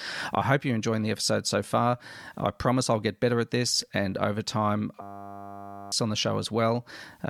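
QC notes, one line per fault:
5.02–5.92 s, system hang loop: after "this and over time", one 10 ms buffer repeats into a 100 Hz buzz; spectrogram shows harmonic stripes, waveform one cycle copied.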